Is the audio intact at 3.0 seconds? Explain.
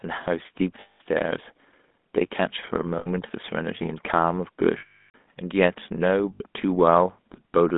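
No. Lost GSM frames at 2.98 to 3.09 s: the decoder repeats the last good frame's settings, giving a rough metallic ring over 80 ms, which fits four lost frames. Underneath runs the GSM full-rate codec, whose pulse-driven vocal-tract model gives plainly audible buzzy roughness, with the line band limited to 200 Hz to 3.6 kHz.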